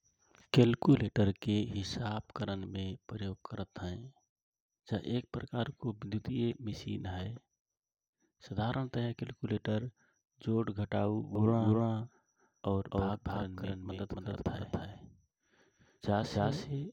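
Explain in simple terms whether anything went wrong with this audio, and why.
Something did go wrong: from 11.35 s to the end, the speech has a doubled audio track. A second copy, about as loud as the original, trails roughly a third of a second behind and appears abruptly. The likely cause is the sound being captured twice through a slower path.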